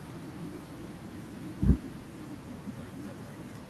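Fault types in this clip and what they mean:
No audible faults detected.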